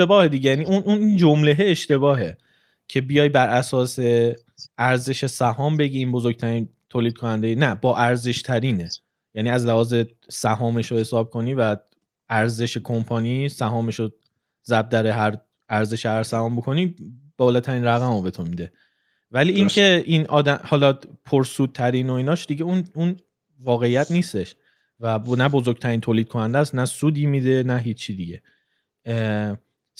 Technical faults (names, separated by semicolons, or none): none